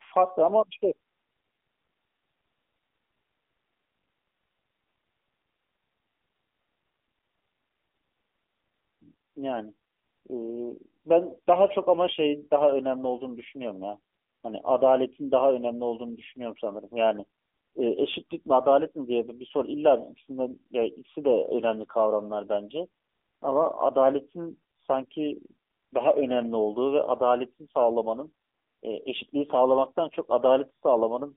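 AMR narrowband mobile codec throughout: its low-bitrate vocal-tract model leaves the speech buzzy and synthetic, which fits the 7.4 kbps mode, with nothing above 3.7 kHz.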